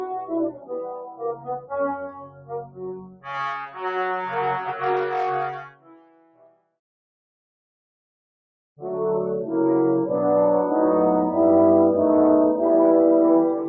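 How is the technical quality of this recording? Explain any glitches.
The recording has been run through a speech-oriented noise suppressor that works against the material rather than cleaning it up.

Throughout, a noise suppressor applied to music or sounds treats sustained tones, ambience and decays as if they were background noise and pulls them down. The gain swings by around 15 dB, so onsets mostly get through while whatever follows sinks, leaving a pumping, fluttering, thinned-out texture. Unlike compressor pumping, which follows overall loudness, this tracks how steady the sound is.

Three passages show sound cut by the noise suppressor. From 0.5 to 1.73 s, about a second of sound drops by up to about 15 dB. From 1.96 to 3.29 s, about a second and a half drops by up to about 18 dB. From 5.52 to 6.74 s, about a second drops by up to about 20 dB. In each passage the held or fading parts are pushed down and their tails shortened, while sudden attacks still come through. 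That separates it from a dropout, which would silence everything, transients included.

The call's microphone processing removes the lowest bass, which is normal for that path.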